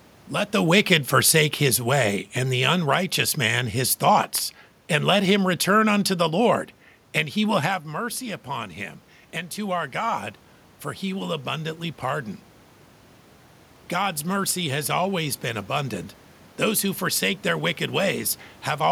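From 0.56 to 2.22 s there is automatic gain falling. The gain control judged the input too loud or its background noise too strong and eased its gain down by about 4 dB, so the speech and the room noise sink together. The waveform envelope tapers smoothly, and a spectrogram dims evenly across all frequencies.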